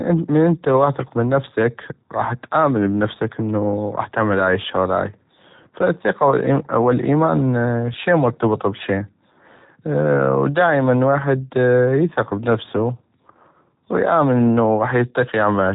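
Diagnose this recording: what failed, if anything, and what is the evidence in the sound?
G.729 codec damage runs throughout: nothing reaches above 4 kHz, and the speech sounds rough and synthetic, consistent with 8 kbit/s pulse-coded reconstruction from a vocal-tract filter.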